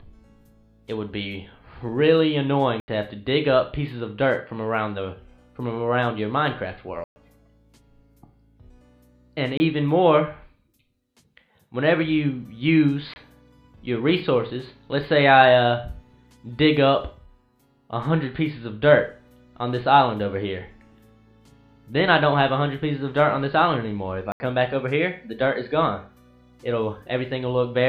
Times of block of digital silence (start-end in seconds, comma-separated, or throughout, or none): 2.80-2.88, 7.04-7.16, 9.57-9.60, 13.14-13.16, 24.32-24.40